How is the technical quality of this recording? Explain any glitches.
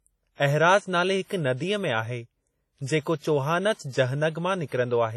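The recording is heavily degraded by lossy coding, with two short smeared attacks near the end.

Throughout, the speech sounds washy and ringing, with a hiss that swells and fades with the signal and nothing above 14.4 kHz. This points to heavy WMA compression, likely at a low bitrate around 32 kbps, where long transform blocks smear quantisation noise and zero weak detail.

Between 3.73 and 3.79 s, and again between 3.89 and 3.92 s, a short hiss precedes sharp attacks, softening them. This is pre-echo: the codec's noise, sized for each loud onset, spreads backwards across its block, about 58 ms and 39 ms.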